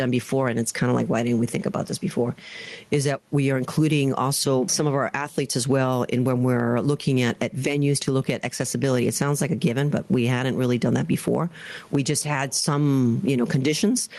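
Throughout the speech, the gain pumps, with a level swing of around 15 dB. The speech itself sounds squashed, with loud and soft syllables pressed close together. This is gain pumping, likely from the input gain being set far too high and a fast limiter or compressor clamping down on every loud sound. The room noise sits about 43 dB below the speech.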